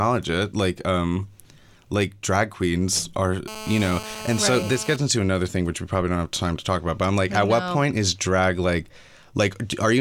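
A hard, raspy buzz at 217 Hz sits steadily under the speech from 3.48 to 4.96 s, about 13 dB down: GSM phone buzz, a nearby handset's call bursts rectified by the audio circuit.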